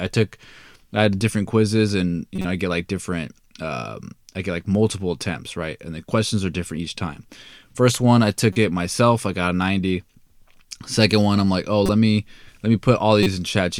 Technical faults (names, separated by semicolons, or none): corrupt frame decoded